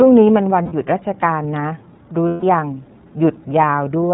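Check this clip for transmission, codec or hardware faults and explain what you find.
Yes, there are two problems: the whole clip has been through the iLBC codec, and a couple of short stretches were lost in transmission.

The iLBC codec damage runs the full length and is plainly audible. The narrowband coding cuts everything above 4 kHz, and each frame's excitation is coded on its own, so the speech comes out clear but a bit rough and synthetic. It fits the 13.33 kbps mode with 30 ms frames.

Lost iLBC frames show up at 0.63 to 0.72 s and again at 2.28 to 2.43 s. Each time, the decoder fills the gap by repeating the last pitch cycle mixed with noise, so you hear a held, slightly buzzy vowel. The gaps fit about three and five 30 ms frames. Because the frames don't depend on one another, the voice snaps back right away.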